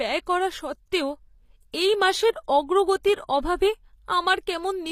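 Across the whole speech clip the treble has a synthetic, gritty quality, and nothing is present above 15.4 kHz. The likely cause is HE-AAC compression, consistent with a low bitrate around 24 kbps. Only the lower spectrum is coded directly, and the upper bands are rebuilt by spectral band replication from copied lower content under a coarse envelope. The damage is plainly audible: sibilants turn metallic and lispy, and harmonics fail to align across the crossover.

At 1.72 s, immediately before "এই মাসের", a brief hiss of about 15 ms precedes the onset. This is pre-echo. The attack falls late in a transform block, so quantisation noise scaled for the loud portion spreads back into the quiet gap ahead of it. The same fault recurs at 3.03 s with an 11 ms spread. Both onsets sound softened and smeared.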